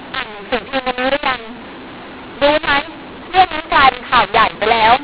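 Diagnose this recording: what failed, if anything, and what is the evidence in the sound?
The G.711 codec stage decoded mu-law audio as A-law, so sample levels are scrambled throughout: speech sounds harsh and distorted, and pauses fill with noise.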